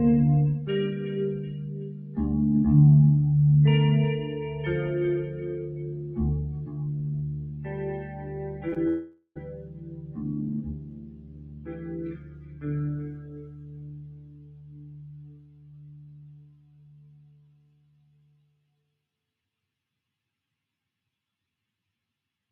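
A speech-oriented noise suppressor has been left running over this non-speech audio for the whole clip. It treats sustained material and tails as noise and pulls them down by around 10 dB, while onsets mostly get through, so the sound pumps and thins as held parts sink. Around 8.69 s and again at 8.74 s there are two back-to-back bits of short concealed packet loss, each about 20 ms missing. The receiver patched them by extending the preceding sound, so you get a quick smear or wobble there. Then from 8.88 s to 9.37 s, about half a second, the audio turns into a continuation of the last sound that decays, ending with a brief silence of about 40 ms before the real signal returns with that stretch gone. That's most likely a long network dropout.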